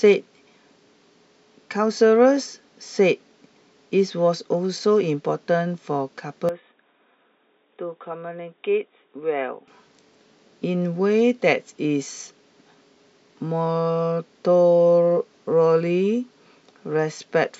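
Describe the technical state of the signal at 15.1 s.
At 15.1 s the speech signal is intact, with no audible technical fault at that point.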